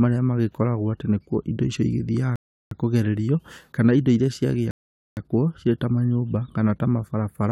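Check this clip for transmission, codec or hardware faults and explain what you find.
The speech pauses twice, a rebuffering stall each time. From 2.36 to 2.71 s it drops to silence and resumes intact at "kũgererio kana indo", adding 0.36 s; from 4.71 to 5.17 s it stops again, adding 0.46 s. The player exhausted its downloaded audio and waited for more.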